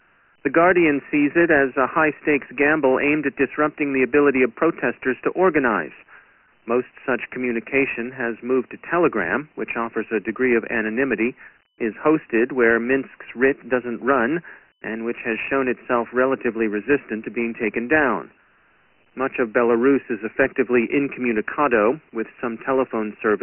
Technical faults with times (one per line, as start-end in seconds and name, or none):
0.00-23.43 Dialogic VOX ADPCM